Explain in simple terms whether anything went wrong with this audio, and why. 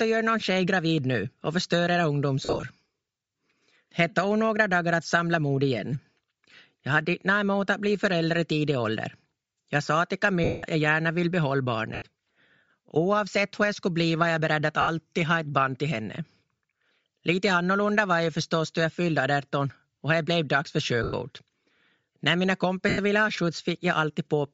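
The whole recording has a breathy, grainy edge on the speech, and the crisp high sounds are thin and hissy. That points to Bluetooth LC3 compression, likely squeezing the sound hard and filling the missing highs with noise.

There are also six brief dropouts of lost LE Audio frames, at 2.45 s, 10.44 s, 11.95 s, 14.81 s, 21.03 s and 22.89 s. Each lasts 70 to 190 ms. The first is a scatter of short gaps. The player patches these gaps by repeating recent sound, so they come out as a noisy smear.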